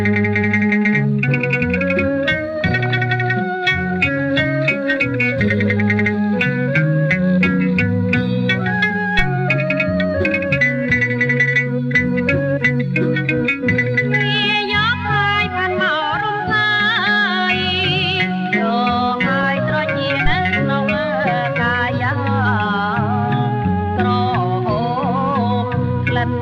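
From 2.61 to 2.98 s, and again from 19.41 to 19.78 s, there is DAB burbling. At a bit error rate of a few tenths of a percent, errors slip past the error correction into the MP2 data, and the sound turns watery and bubbling. On a spectrogram this shows as scattered short blocks confined to single sub-bands.

At 9.19 s and again at 20.26 s comes a phantom power thump. A supply step on the live input passes through the coupling capacitors as a low thump that decays in about 29 ms the first time and 15 ms the second. On the waveform each is a sudden low-frequency swing that dies away quickly.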